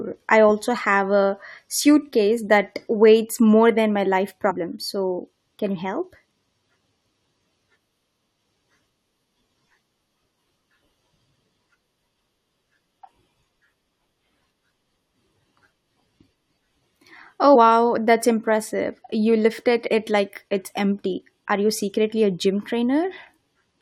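Speech with damaged data in a compressed stream: brief glitches at 4.49–4.52 s, after "more than my life", and 17.54 s, before "that's impressive", where the decoder loses frame sync.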